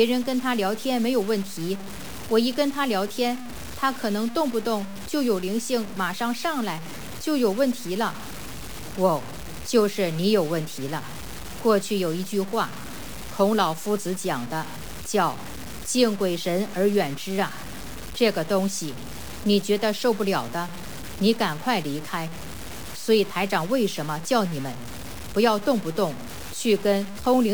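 Throughout, the sound is grainy and gritty in a way that tracks the signal, with the faintest moments sputtering or dropping out. This is likely low bit depth without dither, fitting 5-bit truncation, with error roughly 15 dB below the signal. The waveform shows coarse stair-steps; the spectrogram shows signal-following broadband haze.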